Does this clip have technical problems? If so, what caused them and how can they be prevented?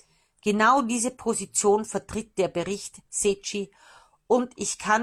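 No, the speech signal has no technical faults anywhere in the recording, so there is no cause to trace and nothing to prevent.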